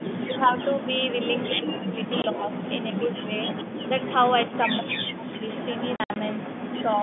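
From 0.0 to 0.8 s the echo canceller likely mistook double talk for echo and turned the talker down: speech suppressed in double talk, dipping by about 10 dB over roughly 150 ms in total. In the same opening stretch, 0.0 to 1.48 s, the far end's canceller likely failed to remove its loudspeaker pickup. This echo leak returns a copy of the voice 162 ms late, about 10 dB below the direct speech.

The suppression returns harder from 1.53 to 3.31 s. Over roughly 0.7 s the voice is gated down by as much as about 35 dB, so syllables thin out or vanish in pieces. From 2.05 to 4.58 s the same delayed echo, again about 10 dB under the speech, trails the talker. At 2.22 to 2.24 s, packet loss filled with silence cuts a clean 20 ms hole, which fits a single lost packet, with hard edges.

From 4.79 to 5.47 s the canceller clamps down again. The voice drops by up to about 40 dB across roughly 0.7 s and cuts out almost completely in patches. 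The echo leak comes back from 5.46 s to the end, now about 15 dB below the speech at the same 162 ms delay.

Between 5.96 and 6.16 s more packets go missing and are replaced with silence. About 120 ms of sound is lost across that 200 ms span, and the longest gap is 60 ms. That pattern points to six lost 20 ms packets. The result is a burst of stuttering dropouts with hard edges, heard through the 150 Hz to 3.5 kHz band of the G.711 line.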